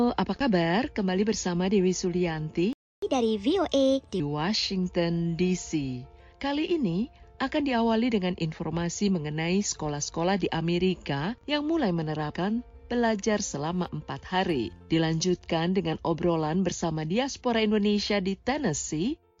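At 2.73 s the audio cuts out for about 0.29 s in a playback stall, likely a starved buffer; the waveform drops to a flat line and the spectrogram goes blank. From 3.02 to 4.20 s comes catch-up at higher speed: playback runs 1.25 times fast, pitch rises about four semitones, and spectrogram harmonics shift upward before settling back.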